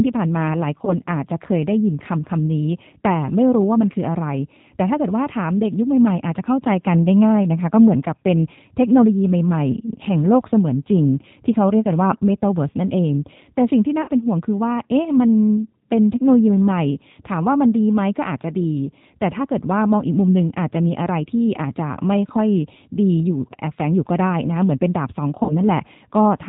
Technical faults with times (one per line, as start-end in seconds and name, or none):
0.00-26.49 G.729 codec
0.85-0.98 VoIP packet loss concealed by the speech codec
14.02-14.10 VoIP packet loss concealed by the speech codec
25.43-25.53 VoIP packet loss concealed by the speech codec